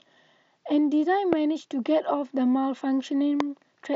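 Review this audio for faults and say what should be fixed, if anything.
Two loud pops stand out in this speech, at 1.33 to 1.35 s and 3.40 to 3.43 s, each a single sharp thump peaking about 20 dB above the speech. The likely cause is a voltage pulse from a plug, switch or static discharge entering the signal chain. Unlike a dropout or a digital click, the speech carries on intact beneath each pop rather than breaking off, and the band stops near 7.7 kHz as expected from the mSBC headset link. Securing connectors, grounding the setup and avoiding switching or touching cables while recording would prevent these pops.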